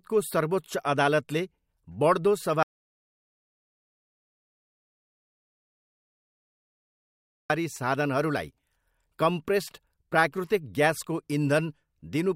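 At 2.63 s the speech cuts to an audio dropout to silence lasting 4.87 s until 7.50 s, with no room tone at all, unlike a noise gate's gradual closing, likely from lost input.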